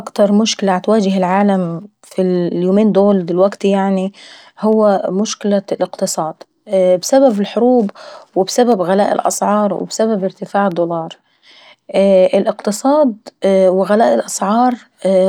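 From 4.73 s to 14.72 s, periodic USB or driver dropouts tick about every 2.0 s, each a sub-millisecond silent gap; the strict spacing sets them apart from random clicks.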